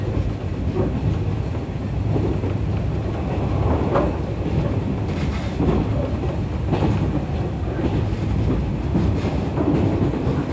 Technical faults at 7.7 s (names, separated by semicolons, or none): none